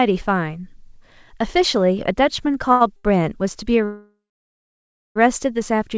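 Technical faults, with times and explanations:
2.72 s and 2.96 s: short stall from a late packet. Each time, a packet of speech was late and the jitter buffer ran dry. The receiver held the last sound instead of leaving a hole. The first hold lasts about 84 ms and the second about 78 ms. Both appear as a brief drawn-out sound with a faint buzz or dip. Nothing is lost. The speech picks up where it stopped, just a little later than before.
3.85 to 5.18 s: call audio freeze. The audio stops moving forward for about 1.3 s. The last sound is carried on as a fading buzz or hiss at first. Roughly the final second of the wait is silence. Then the speech continues from the exact point where it froze. No speech is missing, so a gap has been added. The likely cause is packets held up somewhere along the network route.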